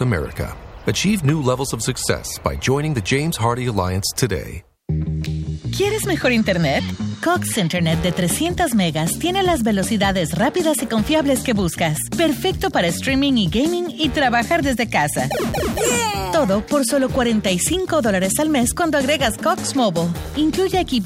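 At 1.29 s and again at 8.46 s a sharp snap sits on top of the sound, each peaking around -15 dBFS. These electrical switching spikes are likely arcs from a nearby switch or motor coupling into the line. They appear as thin vertical broadband streaks on a spectrogram and narrow spikes on the waveform.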